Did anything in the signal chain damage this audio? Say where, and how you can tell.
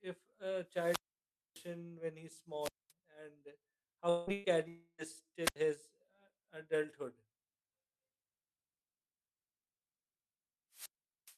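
Yes. Wireless microphone squelch dropouts at 0.70–1.74 s (before "when he's"), 2.60–2.92 s (after "when he's"), 5.43–5.56 s and 10.72–11.37 s: hiss rises, then the receiver mutes the faded RF.

Long network dropouts at 4.09–4.30 s and 4.68–5.01 s: the last sound is stretched out and fades, likely from a stalled stream, and roughly 0.2 and 0.3 s are skipped.

A burst of packet loss at 4.33–4.47 s, in the network path: about 120 ms goes missing, concealed by the last sound held and faded before the audio jumps ahead.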